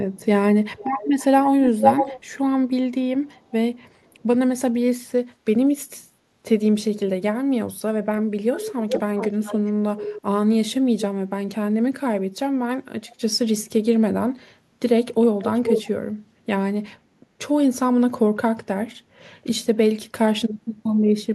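A far-end echo canceller likely leaked loudspeaker sound, giving delayed speech copies at 0.76–2.28, 3.24–4.22, 8.53–10.22, 13.1–13.15 and 15.44–15.87 s, lagging 421–490 ms, from near-equal to faint. The echo canceller then gated the background at 17.2–17.33 s, ducking room sound about 8 dB briefly.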